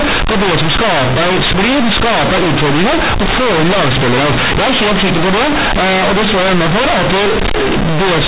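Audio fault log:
Throughout, companded audio read as linear: the A-law bytes are being played straight as plain 8-bit samples, with nothing expanding them back out. Every time the signal crosses zero the output jumps across roughly half its range, so soft passages come out as loud as strong ones and the waveform is badly bent. That's why the speech lands as a harsh, buzzy, very loud mess with heavy noise filling the pauses, sitting on top of ordinary 8 kHz G.711 telephone coding.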